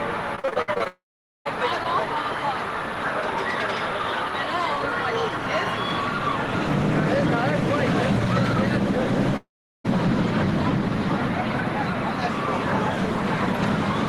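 From 0.35 to 0.88 s, repeated packet loss (robotic sound) sets in: audio data keeps arriving late or not at all, and each short hole is bridged by extending the preceding sound. The holes come in quick succession, the longest about 58 ms, so nearly half of this stretch is patched-over audio. It sounds choppy, with small pieces clipped out.

At 0.88 s this runs straight into a long network dropout, likely a break in the incoming stream, lasting until 1.47 s. The last sound is stretched into a fading buzz or hiss, then roughly 0.45 s of silence follows before audio resumes with the missing portion gone. The same happens from 9.36 to 9.86 s: a brief smeared tail, about 0.37 s of silence, then audio returns with that section absent.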